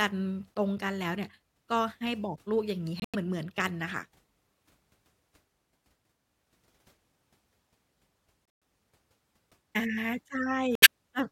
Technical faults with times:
3.00-3.15 corrupt frame muted
8.43-8.62 corrupt frame muted
10.75-10.87 corrupt frame muted

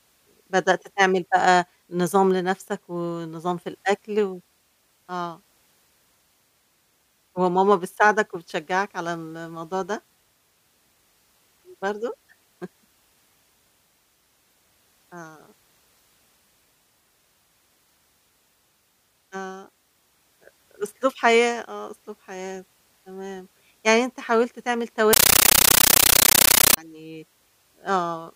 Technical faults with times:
25.13-26.77 compressed stream played as audio

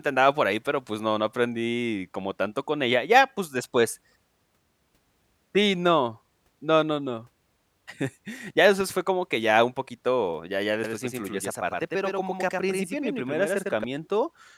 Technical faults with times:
10.84-13.84 doubled audio track

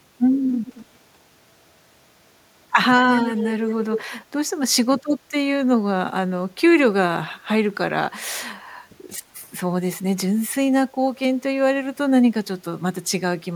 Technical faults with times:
0.66-0.86 echo leak
3.09-4.09 echo leak

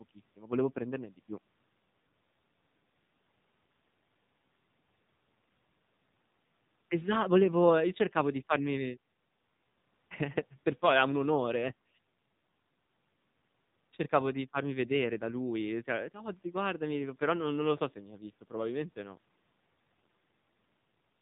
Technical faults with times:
0.00-21.21 AMR narrowband mobile codec

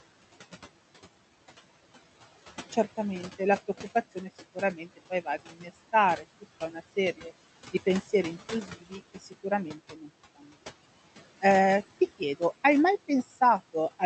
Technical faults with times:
0.00-14.06 noise suppressor artifacts
5.58-5.68 speech cut by the noise suppressor
8.02-8.11 speech cut by the noise suppressor
8.67-9.44 speech cut by the noise suppressor
9.78-10.09 speech cut by the noise suppressor
13.08-13.39 speech cut by the noise suppressor

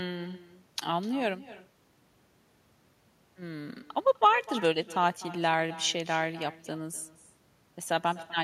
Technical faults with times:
0.00-8.43 echo with no canceller

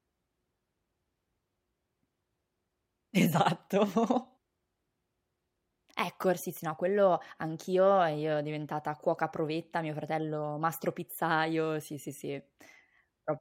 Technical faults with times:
none

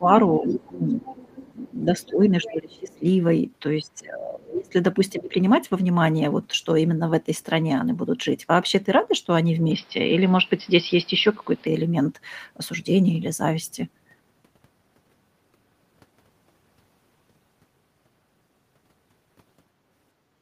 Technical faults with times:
0.00-1.03 speech suppressed in double talk
0.43-2.08 other side's voice leaking through
1.86-3.04 speech suppressed in double talk
2.42-2.99 other side's voice leaking through
3.79-4.74 speech suppressed in double talk
5.12-5.35 speech suppressed in double talk
9.71-11.67 input switched to a poorer device

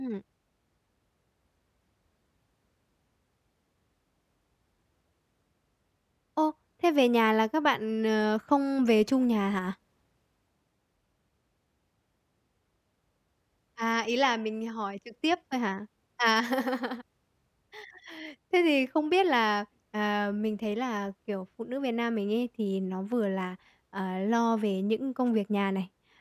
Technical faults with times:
none

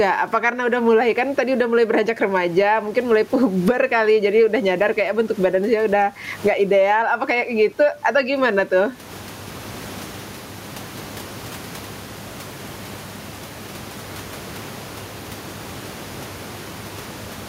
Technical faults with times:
0.00-17.48 gain pumping

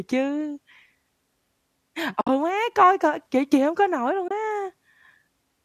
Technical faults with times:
2.21-2.29 AAC frame loss with muting
4.28-4.31 AAC frame loss with muting

